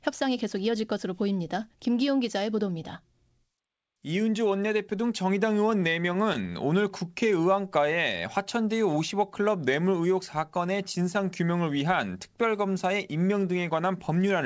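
From 5.70 to 6.48 s the speech has repeated stalls (stutter). Packets arrived late, so the jitter buffer ran dry seven times, and each time the receiver stretched the last sound to cover the wait. Together the fills total about 65 ms and none is longer than 13 ms. Nothing is lost, but the passage drags and judders. On a spectrogram, short stretches appear where the harmonics are held flat, and the waveform shows brief repeated cycles where it should move on. The band above 8 kHz is empty throughout, which fits the call's G.722 codec.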